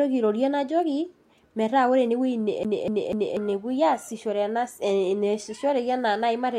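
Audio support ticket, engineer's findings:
CD stuck on one turn, 2.63 to 3.37 s. The same 0.24 s slice of speech plays three times in a row, with a brief mute at each jump. Probable component: disc transport or laser pickup. A scratch knocks the laser back one track per rotation. Waveform: three identical blocks separated by thin near-zero gaps. Spectrogram: the same pattern stamped three times at regular spacing.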